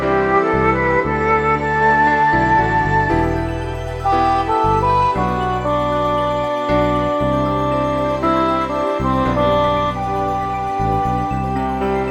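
No technical faults can be heard anywhere in this audio.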